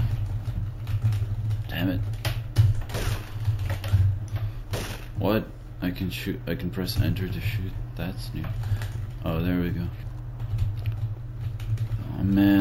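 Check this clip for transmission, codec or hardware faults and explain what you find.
One fault is present: imaging from sample-and-hold upsampling, audible throughout. The audio was raised from 16 kHz to 48 kHz by repeating each sample with no smoothing filter. The original spectrum is therefore mirrored above 8 kHz, with the first copy filling 8 to 16 kHz at about 26 dB below the signal. It sounds like a bright, metallic fizz riding on top. The fizz rises and falls with the sound's level, and its lowest copy moves opposite to any pitch change.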